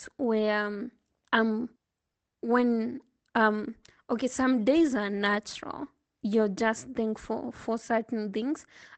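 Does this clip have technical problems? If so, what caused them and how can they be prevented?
Yes. Brief rough, noisy patches at 4.75 to 4.85 s and 5.85 s are lost packets rebuilt from error correction: low-bitrate copies replaced missing Opus packets. Reduce network packet loss, for example with a wired connection.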